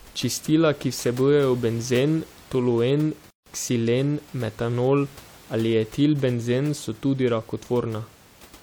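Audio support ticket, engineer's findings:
Gap at a join of encoded pieces, 3.30–3.46 s, right after "ki vsebujejo benzen toluen", picks up at "ksilen metanol ali". About 158 ms of dead air, edges smeared. Separately encoded chunks spliced untrimmed, roughly every 6 s. Room noise, about 25 dB down, sits underneath.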